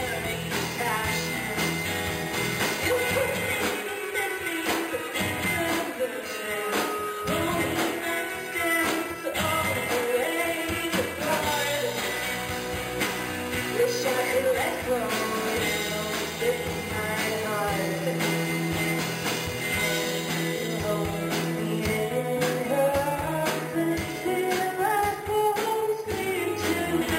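Imaging from sample-and-hold upsampling runs throughout. Each sample was simply repeated to reach a higher rate, which fits an original rate near 11 kHz. Unfiltered mirror copies appear from about 5.5 to 11 kHz and above, about 13 dB below the signal, giving a metallic fizz that tracks the sound's level.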